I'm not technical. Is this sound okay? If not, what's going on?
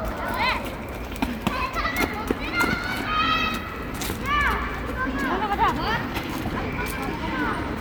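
Yes, nothing stood out as a problem when listening to this sound.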